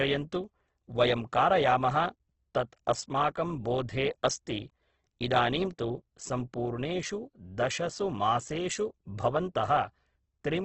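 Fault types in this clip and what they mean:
Opus compression: The speech sounds grainy and rough all the way through, with nothing above 8.2 kHz. That fits Opus in its music mode at a very low bitrate, likely around 12 kbps, filling starved bands with noise or folded copies of lower ones.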